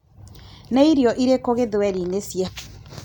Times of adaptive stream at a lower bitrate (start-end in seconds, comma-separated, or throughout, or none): none